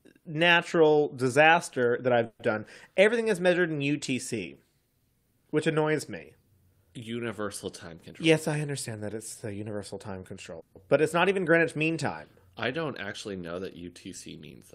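At 2.25 to 2.41 s, between "natural disaster that" and "done everything is measured", there is a call audio freeze, likely caused by packets held up in transit so the jitter buffer ran dry. The receiver stretched the last sound into a fading buzz or hiss for about 140 ms, followed by 20 ms of silence. The sound then picks up exactly where it left off, so nothing is lost, but the stream now runs 140 ms later.

From 7.92 to 9.70 s a jitter buffer speed-up follows. The buffer was holding more audio than its target, so the receiver trimmed out short pitch-period slices one after another, about 150 ms in all. That passage plays at 108% speed with unchanged pitch and sounds hurried.

At 10.60 to 10.77 s, just before "but it's not even", a second call audio freeze occurs. This one likely comes from another stall in packet arrival. A 150 ms smeared continuation fills the gap with no silence after it, and the speech resumes intact but 150 ms later.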